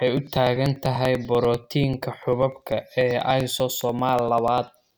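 A steady ticking runs under the speech from 0.08 s to 4.87 s, one tick about every 0.098 s, some fifty in all. These are periodic USB or driver dropouts: each time, a couple of milliseconds of audio is skipped outright, leaving a small jump in the signal.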